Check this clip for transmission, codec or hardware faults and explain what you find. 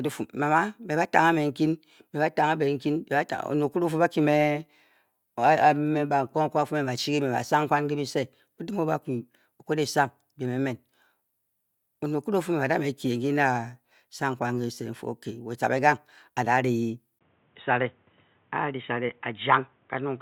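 One fault appears. From 17.19 s, after a 20 ms gap, the speech turns dull with nothing above 3.8 kHz and faint new noise, likely an input switched to a poorer device.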